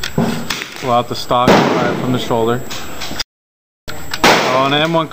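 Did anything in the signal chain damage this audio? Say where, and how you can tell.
Yes. There's an audio dropout to silence from 3.22 s to 3.88 s: the sound stops dead mid-flow and comes back just as abruptly, with about 0.66 s of silence in between and no room tone at all. That total absence of noise tells you the recorder kept writing silence while its input was missing, so the cause is likely upstream, a lost connection, failed link or momentary mute, and whatever happened in that gap is simply gone.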